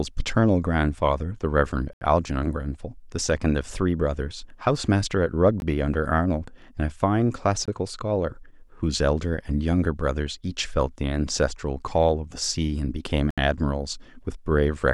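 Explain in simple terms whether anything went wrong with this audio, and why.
Bluetooth stalls interrupt the speech four times: at 1.93 s for 77 ms, at 5.60 s for 19 ms, at 7.66 s for 22 ms, and at 13.31 s for 71 ms. Each time the sound drops to silence and then carries on. The likely cause is radio interference delaying the wireless data, so the headphones used up their small store of audio and had to pause until the missing pieces arrived.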